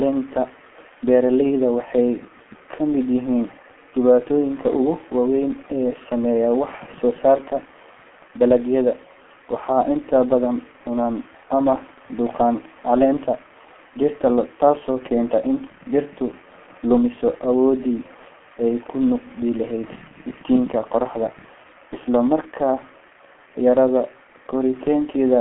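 From start to finish the speech sounds muffled, boxy and hoarse, with consonants smeared together and no air or sparkle above about 3.8 kHz. This is heavy G.723.1 codec damage. The audio was squeezed into a telephone band of roughly 200 Hz to 3.4 kHz, and the coarse 30 ms frames, consistent with a rate near 6 kbit/s, can't track rapid articulation, so fine detail collapses into a rough, hoarse approximation.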